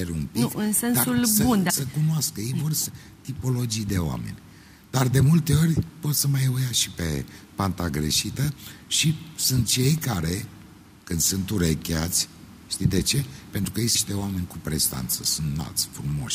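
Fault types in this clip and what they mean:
Compressed frames skipped: chunks of coded audio never get played, so the sound jumps ahead about half a second at 1.69 s and roughly 0.4 s at 13.94 s.
Repeated buffer: the device replays a 5.8 ms buffer, which fits 256 samples, once at 9.98 s and 13.64 s and three times at 15.12 s, giving a click or brief buzz.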